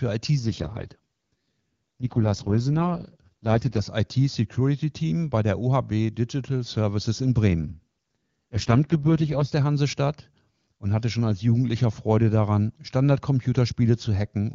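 From 0.39 to 3.83 s and 7.62 to 9.54 s, an AMR rate drop, consistent with about 6.6 kbit/s, makes speech raspy and synthetic. The spectrogram's band stays full and gapless.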